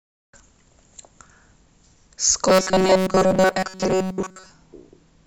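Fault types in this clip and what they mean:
Robotic sound from repeated short buffers: from 2.48 to 4.51 s speech becomes a rigid 188 Hz buzz, likely from a roughly 5 ms block being replayed while new audio lagged.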